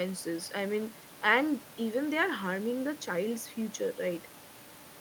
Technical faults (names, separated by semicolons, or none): none